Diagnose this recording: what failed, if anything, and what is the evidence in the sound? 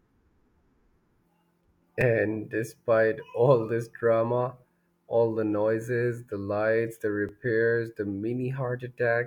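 Brief buzzy clicks at 2.01 s and 7.29 s in the speech come from a repeated buffer at the driver/buffer stage. Fresh audio arrived late, so a 5 ms block replayed twice at 2.01 s and once at 7.29 s, with hard joins and almost no audio lost.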